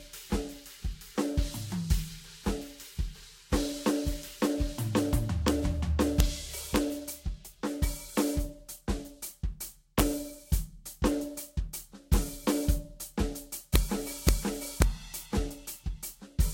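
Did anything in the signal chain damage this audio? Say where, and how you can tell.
Yes. The music is swirly, smeared and hollow throughout, with nothing above 16.7 kHz. That is generation loss, likely from about seven lossy re-encodes near 64 kbit/s at the codec stage. A single encode at that rate would sound cleaner.

Integer overflow at the sample-format or gain stage produces sharp full-range cracks at 5.48, 6.20, 6.76, 9.99–10.01, 13.76, 14.29 and 14.82 s. The peaks wrap sign rather than flattening, which is why they crack harder than clipping would.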